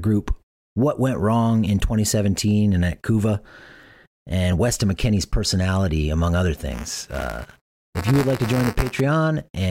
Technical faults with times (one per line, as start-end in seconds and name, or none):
6.70-9.01 buffer tearing